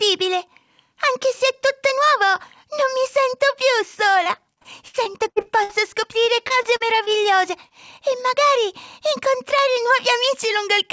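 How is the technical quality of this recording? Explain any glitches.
The recording has two packet-loss glitches. The audio is band-limited with nothing above 8 kHz, which fits a wideband call codec such as G.722.

From 4.24 to 7.09 s there is repeated packet loss (robotic sound). Holes of up to about 80 ms keep arriving, and each is patched by stretching the previous sound. Roughly a fifth of that stretch is synthetic fill, so the sound turns choppy. Unlike a single dropout, the damage persists for nearly three seconds.

From 7.68 to 7.72 s there is a short concealed packet loss. About 20 ms never reached the decoder in time. The receiver extended the preceding sound and blended back into the real audio. The result is one brief smear or wobble, isolated rather than part of a sustained robotic run.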